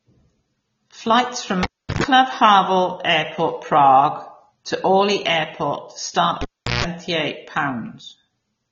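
The whole speech clip sounds dull and plainly swirly, with nothing above 7.6 kHz, which is likely AAC compression at a low bitrate, around 24 kbps. The encoder drops the top band and thins out detail, so sibilants come across smeared.

At 1.63 s the cable gets pulled and plugged in: a pop, about 0.36 s of near silence, a 0.12 s burst of 50 Hz mains buzz as the tip scrapes, then a pop at 2.04 s. It happens again from 6.41 to 6.85 s, with 0.38 s of dropout and 0.16 s of buzz, this time at 60 Hz.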